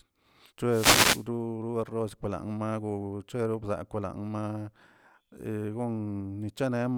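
Speech with a wireless microphone noise hit from 0.67 to 1.26 s. As the radio signal fades, a brief swish of static rises over the voice and then clears, unlike a steady hiss.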